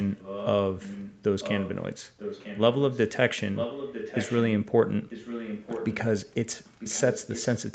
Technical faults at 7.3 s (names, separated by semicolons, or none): echo leak